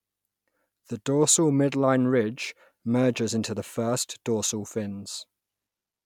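Nothing stood out as wrong on listening to this speech recording.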